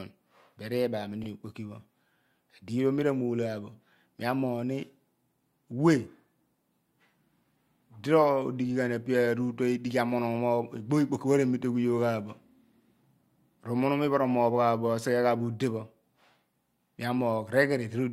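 At 1.23 s the speech stutters briefly: a 40 ms stretch, from 1.23 to 1.27 s, plays and then immediately plays again, giving a quick catch before the sound carries on. These are repeated frames. A short run of compressed frames, a length that fits two 20 ms frames, was written or sent twice, so the decoder rendered the same slice a second time, making the clip 40 ms longer.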